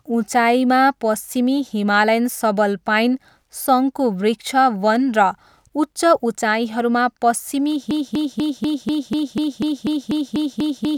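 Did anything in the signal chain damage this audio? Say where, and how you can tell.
Yes. From 7.91 s to the end, the speech locks into a broken-record loop: a fragment of about 245 ms repeats exactly, back to back, 13 times, and the clip finishes while still stuck. Identical repeats with no variation show the same stored audio being re-sent, not new material. The likely cause is a stall in the playback or streaming buffer that kept replaying its last block, so the audio due in those final three seconds is lost.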